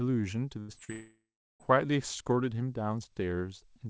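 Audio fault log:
0.60–0.71 s, burst of packet loss: about 80 ms of consecutive call audio failed to reach the decoder in time, so the receiver extended the last received sound for roughly 84 ms and lowered its level as the hole lengthened. The speech turns briefly into a held, fading buzz or hiss. It then picks up a little further along, with that stretch of the utterance simply gone rather than delayed.
0.72–0.79 s and 0.85–0.91 s, short concealed packet loss: twice more, about 40 ms of audio arrived too late to play. Each time the decoder patched the gap by carrying the preceding sound forward, following its pitch where it was voiced and substituting shaped noise where it was not, for roughly 40 ms, then blended back into real audio. Each patch is heard as a quick smear or wobble in the speech.
0.92–1.63 s, long network dropout: roughly 680 ms of audio never arrived, likely because the network stopped delivering packets altogether for that stretch. 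The last sound is stretched into a buzz or hiss that fades away, followed by about 0.41 s of silence. The speech then resumes well past where it stopped, over the same G.722 path whose content ends at 8 kHz, with the intervening portion missing entirely.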